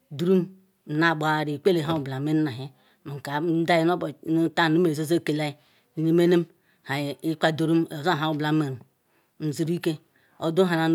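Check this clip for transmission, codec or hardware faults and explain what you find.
Nothing jumps out on a careful listen, so there's no fault to report in this speech clip.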